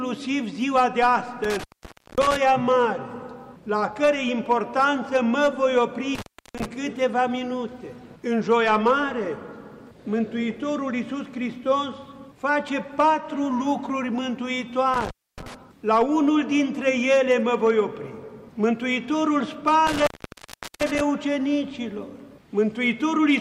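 Intermittent contact drops the sound at 1.44, 6.15, 14.94 and 19.87 s for about 0.54, 0.39, 0.27 and 0.74 s as a loose connection opens. Each gap is crackle-edged and near-silent, showing as a collapsed waveform and a dark spectrogram band bounded by broadband clicks.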